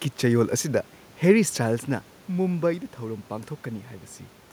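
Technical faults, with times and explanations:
No technical faults can be heard in this speech recording. The background noise belongs to the room itself, and the change in level around 1.5 seconds comes from the talker shifting position relative to the microphone.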